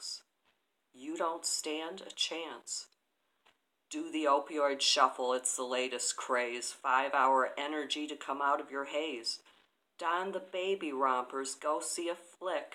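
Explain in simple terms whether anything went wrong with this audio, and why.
Nothing went wrong here: no dropouts, glitches, distortion or other playback faults can be heard anywhere in the recording.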